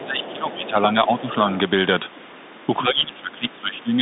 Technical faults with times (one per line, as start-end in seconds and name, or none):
0.00-4.02 Bluetooth CVSD headset codec
0.00-1.37 speech suppressed in double talk
0.20-0.33 other side's voice leaking through
0.62-0.69 other side's voice leaking through
1.19-1.35 other side's voice leaking through
2.16-2.20 other side's voice leaking through
2.54-2.63 other side's voice leaking through
2.82-4.01 speech suppressed in double talk